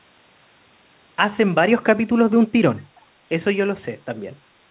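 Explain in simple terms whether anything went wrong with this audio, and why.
Between 2.95 and 3.01 s there's a very faint, brief echo leak: speech returns about 0.42 s late, likely from a loudspeaker echo that wasn't fully cancelled. It's a distinct delayed copy, not room reverberation smearing the sound.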